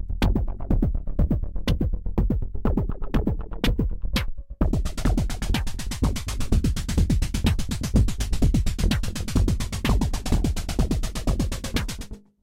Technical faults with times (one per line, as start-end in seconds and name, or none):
none